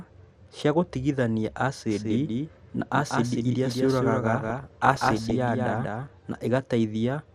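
From the start, the speech sounds dull and gurgling, with a granular roughness on every syllable and the top end thinning in and out. This is plainly audible MP2 compression, likely at a low rate, which fits something around 80 kbps. At that rate the encoder cannot fund all 32 sub-bands, so upper bands drop out from frame to frame and the ones that remain are coarsely quantised.

Just after "cia gũtigithania", at 1.9 s, a second copy of the speech appears, trailing the first by about a fifth of a second and roughly 5 dB quieter. It is dry, full-band and without room colour, and it cuts in abruptly and cuts out just as abruptly at 6.08 s. This is a doubled audio track, likely from the same signal being picked up a second time over a slower path and mixed back in.

From 4.32 s to 5.31 s, a bubbling, muddy texture with chirps and squelches sits over the speech. This is DAB burbling: errors in the MP2 data are slipping past error correction at a rate somewhere under one percent and corrupting a whole run of frames. 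Damaged samples put short blips of noise into single sub-bands, and damaged scale factors make sub-bands jump in level for up to a frame, which produces the squelching.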